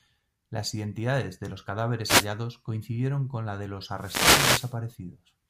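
At 2.04 to 2.28 s, after "identidades de los", a wireless microphone noise hit swishes in. The radio signal faded, raising receiver static. A longer burst follows from 3.95 to 4.78 s, after "con la de los".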